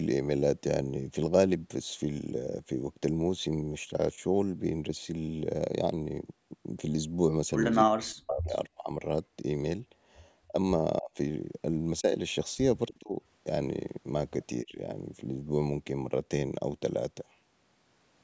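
Speech suppressed in double talk first appears from 7.84 to 8.56 s, where the voice sinks by roughly 40 dB over about 0.7 s. The cause is likely an echo canceller that, faced with both ends speaking at once, could not tell the local talker from loudspeaker echo and attenuated everything. The same ducking returns in shorter bites at 8.72–8.9 s (about 30 dB), 10.48–10.55 s (about 20 dB), 11.0–11.17 s (about 25 dB), 12.01–12.08 s (a slight dip of about 5 dB), 12.88–13.17 s (about 20 dB) and 14.63–14.8 s (about 15 dB). Each sounds like the voice briefly dropping away or thinning.

An echo leak sits inside that first dip, at 8.27–8.33 s: a brief scrap of voice arriving 351 ms late, about 15 dB below the speech. It is likely residual loudspeaker sound that the far end's canceller failed to remove from its microphone signal and sent back down the line. It is heard as a faint ghost of the voice rather than a sustained repeat.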